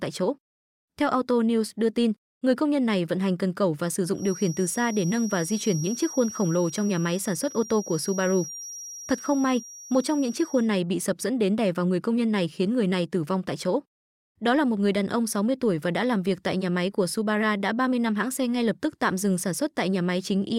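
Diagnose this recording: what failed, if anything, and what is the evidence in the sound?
A thin, slowly swelling and fading whistle near 5.7 kHz sits well under the speech from 4.12 to 10.72 s, after "cần cẩu và sử". This is likely a feedback whistle from a loudspeaker-to-microphone loop held just short of runaway.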